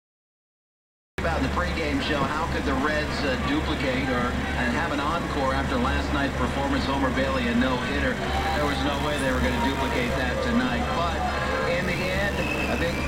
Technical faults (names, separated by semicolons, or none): cut-off start; computer activity noise